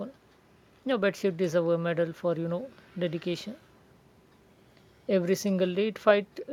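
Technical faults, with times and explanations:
No technical faults detected.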